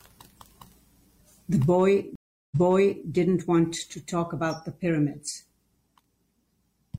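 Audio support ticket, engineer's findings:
Stream reconnect, 2.16 to 3.07 s. Speech drops to about 360 ms of silence, then resumes about 0.56 s earlier, replaying audio. Probable component: network/player. Connection broke, player reconnected, fresh decoder started mid-stream, and the server resent a burst.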